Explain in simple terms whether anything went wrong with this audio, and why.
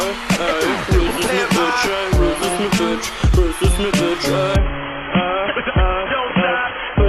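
Partway through, the adaptive stream switched to a lower bitrate. When a connection slows, a streaming service quietly swaps in a smaller, more heavily compressed version of the audio so playback doesn't stop. Here that happens at about 4.56 s and lasts to the end. There's no gap or skip, just a sudden drop in quality: everything above roughly 3.4 kHz disappears, so the sound turns dull, muffled and slightly phone-like, with more audible compression roughness.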